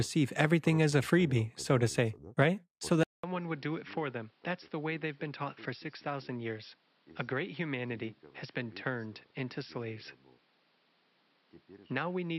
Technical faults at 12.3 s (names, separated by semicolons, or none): input switched to a poorer device